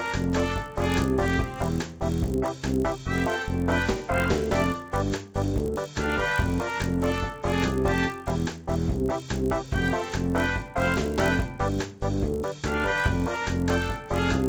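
A resampler restarted on every block is at fault throughout this recording of sounds, in what sounds like a 16 kHz to 48 kHz conversion. Each block was converted in isolation, so the filter had no real neighbouring samples at its edges and left a small error at every seam. These seams repeat at 50 Hz, which fits 20 ms blocks, and are close enough to fuse into a steady low buzz that rides on the sound and drops away in silence.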